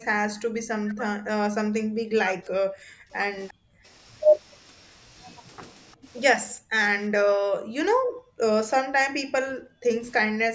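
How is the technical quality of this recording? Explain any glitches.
The recording has repeated level collapses and two faint echo scraps, typical of a speakerphone call under strain.

Speech suppressed in double talk appears from 0.0 to 3.14 s, 3.52 to 3.85 s, 5.95 to 6.07 s, 6.54 to 8.41 s and 8.79 to 10.54 s. The speech sinks by up to about 40 dB, likely because the echo canceller mistook overlapping talk for its own echo. Unlike packet loss, the dropouts are level ducks tracking the other side's activity.

An echo leak appears at 3.48 to 3.54 s and 5.92 to 5.96 s. A delayed copy arrives 352 ms after its source, about 30 to 40 dB below the speech. It is likely residual loudspeaker pickup the canceller missed. The fixed delay separates it from room reverberation, and the band limit at 8 kHz comes from the call's normal microphone processing.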